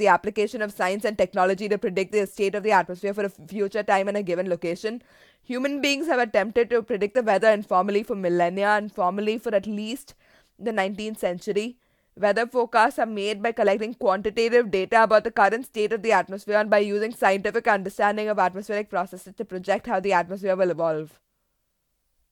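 No audible technical faults.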